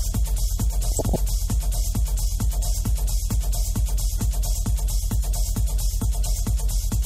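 The whole thing sounds dull and a bit gurgly, with upper bands dropping in and out and a grainy edge on what's left. That's likely MP2 compression starved of bits, and the damage is plainly audible, which fits a low rate around 80 kbps. On top of that there's DAB burbling, bubbly squelches where single sub-bands jump in level. It runs from 0.85 to 1.16 s, fairly dense, pointing to a small but real bit-error rate getting through. A shorter, lighter burst follows at 2.76 to 2.83 s.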